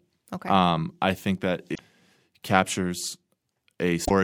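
Two brief glitches break up the speech, at 1.71 to 1.79 s and 4.04 to 4.10 s, from damaged data in a compressed stream that made the decoder lose sync.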